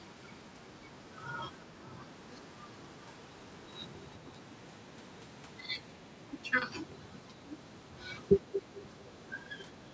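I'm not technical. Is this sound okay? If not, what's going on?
No. Twice the room sound behind the speech suddenly drops away to near silence and then comes back: from 1.66 to 1.89 seconds and from 8.41 to 8.71 seconds, each lasting only a fraction of a second. This is background gated by the echo canceller. On a call, this part tries to stop the other person's voice from the loudspeaker being sent back, and here it briefly muted the microphone too hard.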